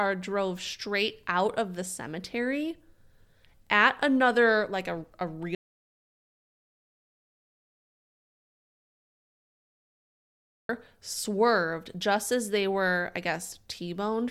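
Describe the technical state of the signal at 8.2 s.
At 8.2 s the speech is in the middle of an audio dropout to silence running from 5.55 s to 10.69 s, roughly 5.1 s of nothing at all. The signal is silent, with no room tone or noise floor, which points to the input being lost while the recorder kept writing empty samples, likely from a disconnected device, failed link or accidental mute. Speech stops abruptly, then resumes mid-flow, and whatever was said in between is gone.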